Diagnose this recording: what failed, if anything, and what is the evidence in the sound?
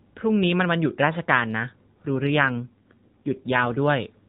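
AMR rate drop, 2.07 to 3.77 s: speech turns rougher and more synthetic without a gap, fitting a network-ordered codec fall from 12.2 to 5.9 kbps.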